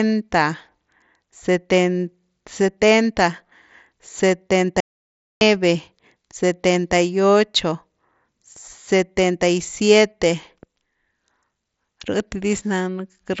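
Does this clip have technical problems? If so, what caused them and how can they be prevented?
Yes. There is an audio dropout to silence from 4.80 s to 5.41 s. The speech stops abruptly and about 0.61 s is lost. The gap is silent, with no room tone underneath. Then the speech resumes mid-flow. The likely cause is a brief loss of input, such as the Bluetooth headset link failing while the recorder kept writing silence. That link runs through an mSBC headset codec, with nothing heard above about 7.7 kHz. To prevent it, keep the headset close, charged and free of radio interference, and monitor the input level while recording.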